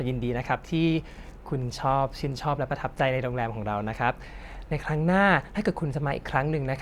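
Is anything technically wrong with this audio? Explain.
No, nothing is technically wrong with this audio.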